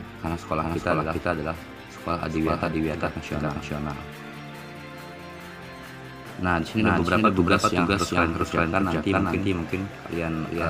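A doubled audio track runs through the whole clip: every sound is followed by a second, equally loud copy, roughly four tenths of a second later. It is likely captured twice through a slower path, and the late copy arrives dry and full-band, with no decay.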